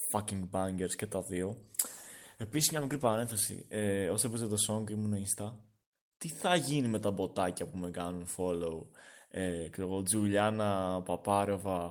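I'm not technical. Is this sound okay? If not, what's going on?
No. From 1.62 to 4.81 s there's a call bitrate drop: the connection squeezed the audio, so speech sounds rough and muffled until it recovers.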